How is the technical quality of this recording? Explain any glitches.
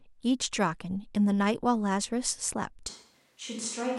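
The recording has one glitch: at 2.9 s the speech suddenly turns roomy and hollow through to the end, most likely a switch to a distant microphone, with the close mic's signal lost and a farther pickup, such as a camera mic, taking over. Bass thins, the level falls by roughly 5 dB, and room noise rises to about 35 dB below the speech. Unlike a plain volume drop or filter, the added reverberation and background noise arrive together in one instant step.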